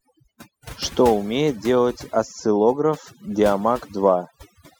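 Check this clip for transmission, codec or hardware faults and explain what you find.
One fault runs through the whole recording: overdone noise removal. A noise reducer set far too aggressively pulls each frequency band down hard whenever its level sits near the estimated noise floor, so quiet speech detail gets cut along with the noise. Between phrases the background collapses to near silence speckled with twinkling artefacts. On a spectrogram the gaps look almost black, scattered with isolated bright dots, while the speech shows ragged, hollowed-out upper harmonics.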